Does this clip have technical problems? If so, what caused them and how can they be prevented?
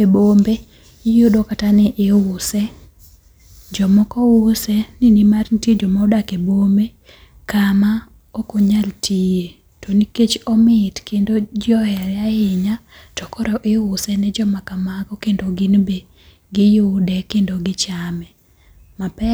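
No, this clip has no technical problems.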